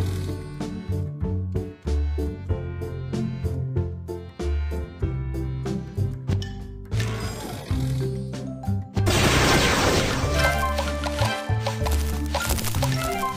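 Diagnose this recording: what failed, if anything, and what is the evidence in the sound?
Nothing failed that can be heard: no stage between capture and playback leaves a mark on this recording. Listening across the whole of it turns up no event that would point to a problem at any point in the chain.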